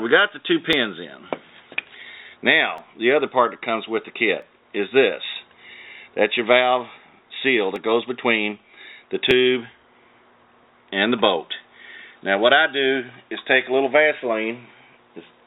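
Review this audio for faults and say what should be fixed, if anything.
Sharp single clicks at 0.73, 2.78, 4.42, 7.76 and 9.31 s are dropped samples: each time, under a millisecond of the stream goes missing, so the waveform jumps abruptly to a later value with no smooth transition. On a waveform this appears as a sudden step discontinuity. On a spectrogram each click is a thin vertical line spanning the band, which here stops at 4 kHz, consistent with the G.711 A-law call path. The likely cause is a capture or playback buffer occasionally losing a handful of samples during an underrun or clock adjustment. To prevent it, give the audio thread enough buffer headroom and use proper resampling for clock drift rather than discarding samples.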